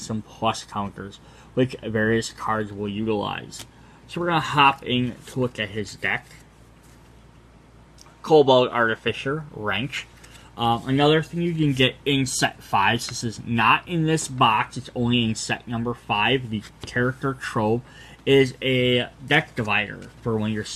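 No technical faults can be heard in this audio.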